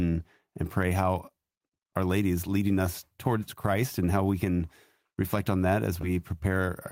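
A short speech clip with one glitch near the end: right after "can reflect on that", from about 6.01 to 6.05 s, there's a short concealed packet loss. Around 20 ms of audio didn't make it to the decoder in time, so the receiver patched the gap by extending the preceding sound for about 15 ms and then crossfading back into the real signal. You hear it as a quick smear or wobble rather than a clean dropout.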